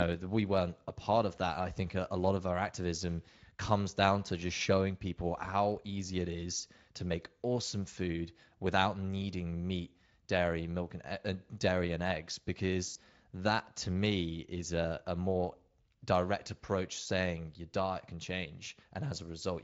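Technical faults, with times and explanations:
12.87–12.99 s, VoIP packet loss concealed by the speech codec: 80 ms of packets went missing after "uh dairy and eggs", and the speech decoder extrapolated its last pitch and filter, stretching the sound out and fading it before "that to me is".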